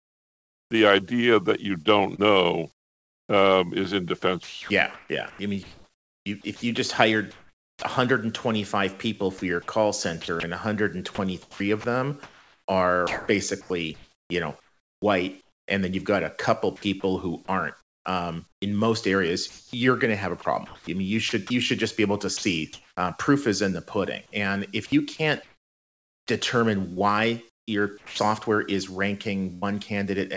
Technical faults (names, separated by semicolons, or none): sound chopped by the voice detector; burst of packet loss